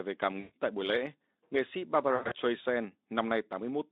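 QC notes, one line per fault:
0.39–0.53 s and 2.15–2.36 s: VoIP packet loss concealed by the speech codec. After "về cảm", 140 ms drops out and the decoder stretches its last pitch and filter at falling gain into a fading buzz or coloured noise. After "buổi lễ nghệ sĩ", 140 ms goes missing across 160 ms, with the longest gap 100 ms.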